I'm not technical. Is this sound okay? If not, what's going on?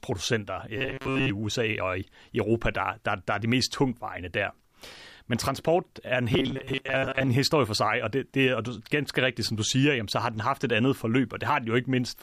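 No. From 0.78 to 1.29 s and again from 6.32 to 7.29 s, the voice turns into a stiff, metallic buzz at 134 Hz. That's robotic sound from repeated short buffers, likely caused by audio arriving too slowly, so tiny snippets repeat for most of each stretch.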